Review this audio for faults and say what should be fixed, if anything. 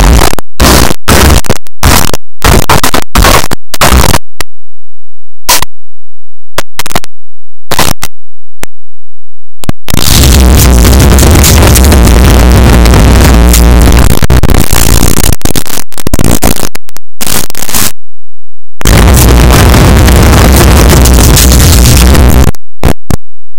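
Throughout the clip the sound is buried in very loud, harsh distortion, and quiet stretches are as loud as busy ones. That points to a likely signed and unsigned mix-up: 8-bit samples read with the wrong sign convention, flipping the top bit so every zero crossing jumps across the full range. Correctly read 8-bit audio would only add faint grainy noise, and ordinary clipping would leave quiet passages quiet. To prevent it, declare the sample format explicitly (8-bit WAV is unsigned) and check it at every import and conversion step.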